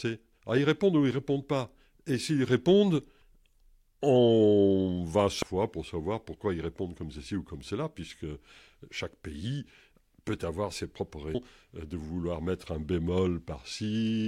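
It's a speech clip with one glitch from damaged data in a compressed stream, right at 5.42 s. The decoder hit corrupted bytes, lost frame sync and had to hunt for the next valid header, so you get a brief blip that's only a few milliseconds long.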